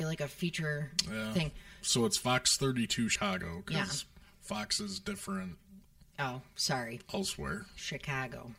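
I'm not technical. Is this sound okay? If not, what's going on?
No. Throughout the speech there is channel delay (comb filtering). One side of the stereo is late by roughly 5 milliseconds, and combining the sides cancels regularly spaced pitches starting around 100 Hz. Unlike room echo, this gives a constant hollow, phasey tone rather than a tail.

At 3.15 s, compressed frames are skipped. The speech jumps ahead by roughly 150 milliseconds, which fits a handful of 32 ms chunks of the compressed file going missing. Unlike a dropout, there's no silence, just lost sound.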